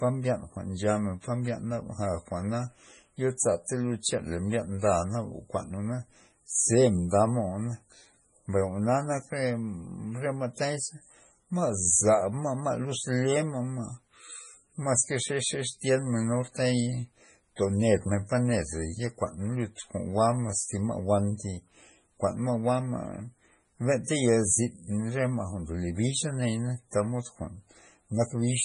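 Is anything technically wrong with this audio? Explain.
Yes. Throughout the speech, nothing sounds above 10.5 kHz, and the audio is heavily watery and swirly. The likely cause is MP3 compression, at a bitrate that fits about 24 kbps. Starved of bits, the encoder cuts the treble. It also drops weak frequency lines, which flicker from frame to frame.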